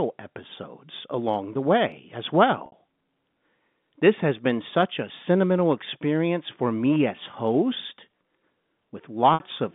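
Speech carried over a G.711 telephone line, with two gaps from packet loss with pitch repetition. At 2.66 s and 9.34 s, about 60 ms drops out. Each gap is bridged by a held, buzzy repeat that fades out.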